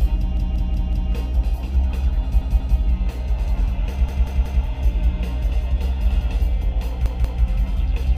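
A repeated buffer stutter occurs at 0.37 to 1.12 s, 2.42 to 2.79 s, 4.09 to 4.64 s and 7.06 to 7.43 s. Starved playback loops one 186 ms chunk, which fits an 8192-sample buffer, with hard joins. Unlike a dropout, there is no silent gap.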